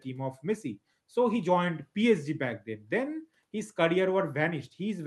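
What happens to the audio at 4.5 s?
Nothing goes wrong at 4.5 s; the audio is intact at that point.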